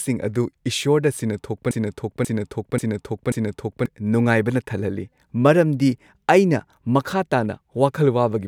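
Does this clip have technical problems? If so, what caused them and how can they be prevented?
Yes. From 1.71 to 3.86 s a broken-record loop repeats the same 0.54 s fragment four times, identically and back to back, unlike a fading echo. The speech due in that span is lost, likely because playback or streaming stalled on its last buffer. Watchdog timeouts that mute or resync a stalled buffer, rather than replaying it, prevent this.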